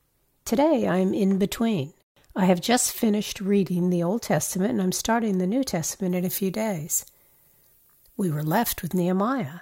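From 6.10 to 9.00 s, pre-emphasis is left on. The treble boost matching an FM 50 µs curve was never undone. Highs sit about 11 dB too strong at 10 kHz, so speech turns thin and sibilant.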